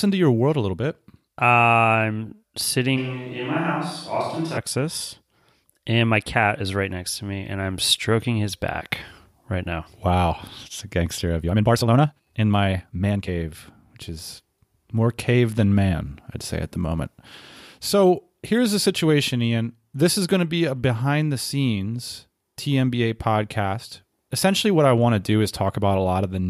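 From 2.99 to 4.56 s the close microphone's feed likely dropped out, leaving the recording on a switch to a distant microphone. The speech turns abruptly roomy and hollow, with thinner bass, about 5 dB quieter, and with room noise around 35 dB below it.

From 11.41 to 13.29 s, right after "it's a gangster of", a time-stretched section appears, likely from software squeezing the audio to fit a length. The pace jumps to about 1.67 times normal while the pitch holds, so the speech sounds rushed.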